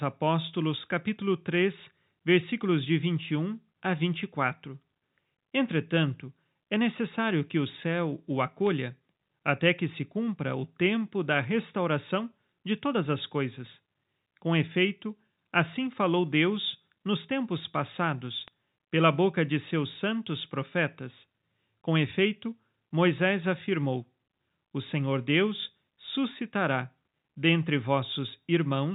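Bit errors on a digital phone line corrupt samples at 8.67 s after "que o céu o", at 15.73 s, and at 18.48 s before "pela boca de seus". Each flipped bit corrupts a single mu-law sample, with 2, 1 and 4 frames hit respectively.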